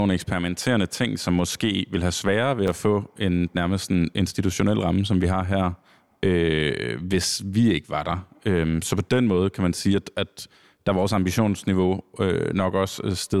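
At 2.67 s, right after "vil have sværere ved", there's a burst of loose connector crackle lasting to 2.76 s, just before "få en nærmest en". A worn or dirty contact is making and breaking, chopping the speech into an irregular scratchy rasp.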